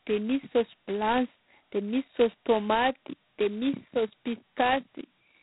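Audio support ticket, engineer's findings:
G.726 ADPCM, whole clip. Harsh rasping hiss riding on the speech, rising and falling with level. Nothing above 3.9 kHz. Only two bits a sample coding the prediction error, which fits 16 kbit/s. Coarse steps give heavy quantisation noise.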